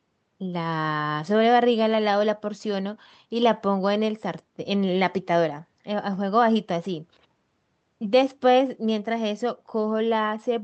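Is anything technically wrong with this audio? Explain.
No, nothing is technically wrong with this audio.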